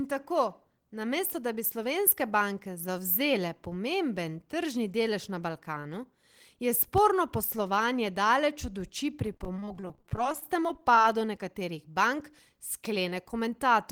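Between 9.34 and 11.05 s, packets were repeatedly lost or late, causing repeated packet loss (robotic sound). Each brief gap, the longest 32 ms, was patched by stretching the preceding sound, concealing about 28% of that stretch, so the speech turns choppy and robotic.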